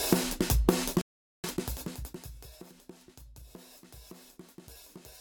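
A rebuffering stall runs from 1.01 to 1.44 s. The player exhausted its downloaded audio and halted, so the sound drops to silence for about 0.42 s, then picks up exactly where it left off. Nothing is skipped.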